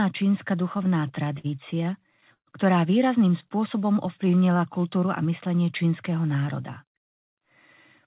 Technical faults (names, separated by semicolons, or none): repeated stalls (stutter); jitter buffer slow-down; jitter buffer speed-up